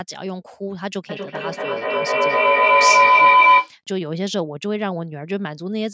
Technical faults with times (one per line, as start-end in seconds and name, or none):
1.09-3.78 feedback howl